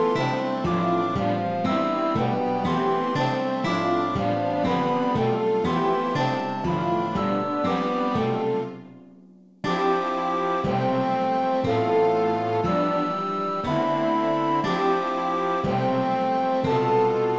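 No technical faults are audible anywhere here.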